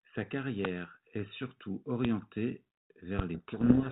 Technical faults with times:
0.65-0.67 loud pop
2.05-2.07 loud pop
3.19-3.22 loud pop
3.34-3.92 codec payload misread

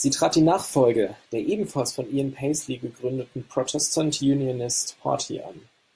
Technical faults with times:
none

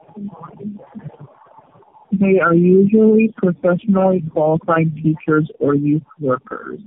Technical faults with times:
0.00-6.86 tandem speech coding

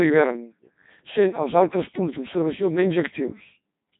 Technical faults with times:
0.00-4.00 Codec 2 vocoder

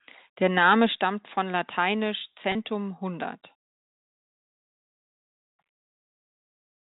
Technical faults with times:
1.02 microphone volume stepped down
2.52-2.55 packet loss with pitch repetition

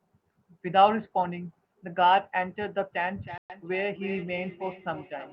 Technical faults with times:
3.17-5.33 feedback echo between two devices
3.38-3.50 playback stall

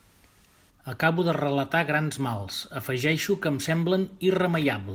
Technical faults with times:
none

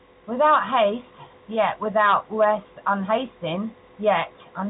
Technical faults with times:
none

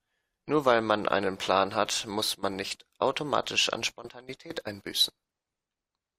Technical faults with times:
none

